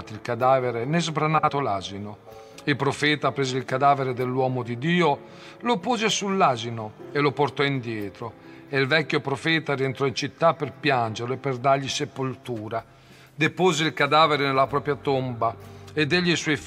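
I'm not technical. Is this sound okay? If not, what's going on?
No. From 1.38 to 1.50 s there are frames out of order. Two tiny chunks swap places, causing a brief garbled flutter.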